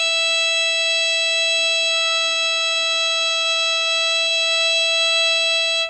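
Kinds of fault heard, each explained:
AAC compression: dull, smeared, warbling music with nothing above 8.2 kHz; a spectrogram shows a flat ceiling and blotchy bands, likely from heavy AAC-LC near 16 kbps.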